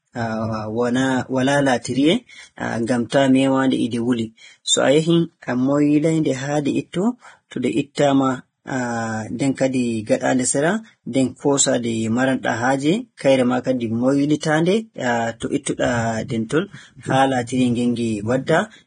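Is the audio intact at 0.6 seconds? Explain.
No. The speech at 0.6 s carries heavy, grainy, hissy distortion with nothing above 9.7 kHz, likely Vorbis compression at a low bitrate quantising the treble coarsely.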